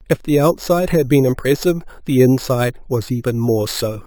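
Throughout the speech, a bright, metallic fizz rides on top of the sound, rising and falling with it, and in the 6 to 12 kHz band it moves opposite to the pitch, sitting about 21 dB below the signal. This is imaging from sample-and-hold upsampling: each original sample was simply repeated to raise the rate, with no smoothing filter, so mirrored copies of the spectrum leak upward. The 6 kHz fold point fits an original rate of 12 kHz raised to 48 kHz.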